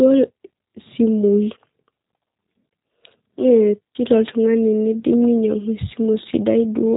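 G.729 codec coding runs throughout the speech, with nothing above 3.8 kHz. The sound is rebuilt from a vocal tract filter, pitch predictor and a few pulses per frame, fitting an 8 kbit/s rate, leaving a plainly rough, synthetic quality.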